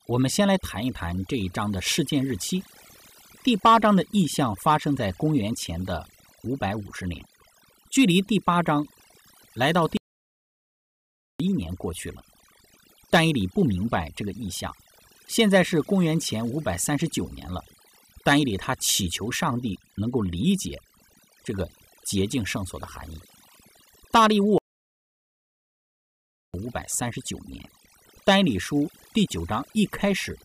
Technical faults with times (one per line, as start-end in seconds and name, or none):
0.00-30.45 overdone noise removal
9.97-11.40 playback stall
24.58-26.54 playback stall